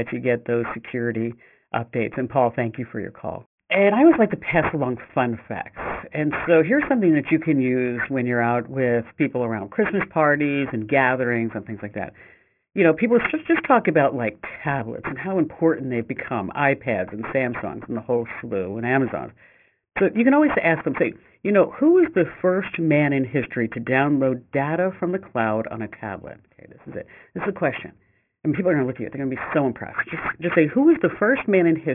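Aliasing runs throughout this speech, consistent with a drop to a 6 kHz sample rate without filtering; content above 3 kHz folds back as gritty, metallic sibilants, and the spectrogram shows energy packed hard against the 3 kHz edge.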